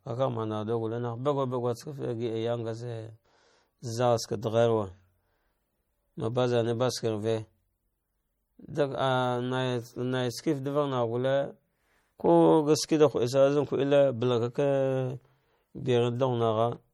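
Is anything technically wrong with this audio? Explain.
Yes. All the way through, the speech has plainly audible MP3 compression damage, likely from encoding at a low bitrate, which fits something around 48 kbps. At that rate the encoder can't fund all its frequency lines, so it zeroes the weaker ones, and they flicker on and off from frame to frame. That gives the speech a watery, swirly texture, with metallic chirps on s sounds and softened attacks. The treble itself isn't chopped low; nothing sits above about 21 kHz.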